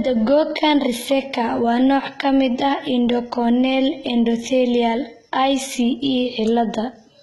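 Speech running the whole way through with heavy HE-AAC compression damage: nothing above 11.8 kHz, and the treble sounds copied up from lower bands rather than real, so s sounds come out gritty and lispy. That's likely a very low bitrate, fitting something around 16 kbps.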